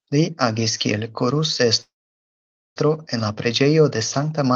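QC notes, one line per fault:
1.81–2.79 s, call audio freeze: short fading buzz, then 0.87 s flat waveform and blank spectrogram; likely jitter-buffer underrun, speech resumes with nothing lost.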